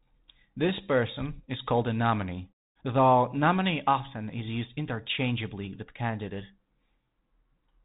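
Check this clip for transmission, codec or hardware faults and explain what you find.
No transmission, codec or hardware faults turn up in this clip.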